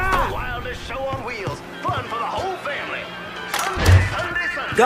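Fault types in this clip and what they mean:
No technical faults can be heard anywhere in the clip. There is nothing here that needs a fault description.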